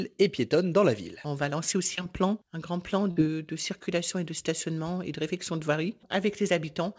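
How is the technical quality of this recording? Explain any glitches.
The recording has two packet-loss glitches, heard through a call codec that leaves nothing above 8 kHz, which fits a G.722 call path.

At 1.96 to 1.99 s there is short concealed packet loss. A few hundredths of a second arrived too late for the decoder, and the receiver bridged the hole by extending the preceding sound for about 11 ms before blending back. About 20 ms of real audio is missing, heard as a brief smear or wobble.

At 3.11 to 3.18 s a burst of packet loss removes a longer stretch. The receiver extended the last sound for about 52 ms, turning it down as the gap continued, then resumed further along. That leaves a short held, fading patch and about 60 ms of real audio missing.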